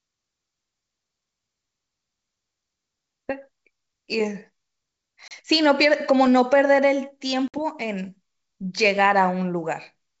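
Packet loss on an ADPCM call strikes at 5.28 s and 7.48 s. Gaps of 30 ms and 60 ms, likely a few and then several packets, drop hard into silence. The decoder's predictor and step size lose track, so speech resumes with brief distortion before settling.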